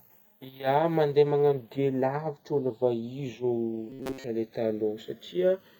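Throughout the clip, the channels are drifting apart: the two sides run on clocks that disagree by roughly 150 ppm, so their offset grows to under a millisecond by the end. Summed to mono, this sweeps comb notches slowly through the spectrum, heard as a slow flanging.

From 3.90 to 4.24 s, a robotic sound from repeated short buffers appears. The likely cause is audio arriving too late, with the software looping a fragment of about 7.5 ms for most of that stretch. The speech becomes a rigid, metallic buzz at 133 Hz.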